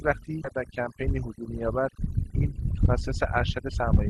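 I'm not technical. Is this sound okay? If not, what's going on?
No, not quite. There are three separate problems.

The noise removal was set far too strong, an overdone noise removal that runs through the whole clip. It cuts away anything resembling background hiss, including softer parts of the speech. The background drops and breaks up into twinkling, warbling specks.

At about 0.43 s there is a skip ahead. Roughly seven tenths of a second of speech never reached the listener, and playback jumped straight to later audio with no pause, so a chunk of speech is simply missing and the two sides are joined abruptly.

From 1.02 s to 1.91 s a jitter buffer speed-up occurs. The receiving end had built up too much waiting audio, so it trimmed many tiny slivers, about a twentieth of a second in total. The speech runs about 4% fast at normal pitch.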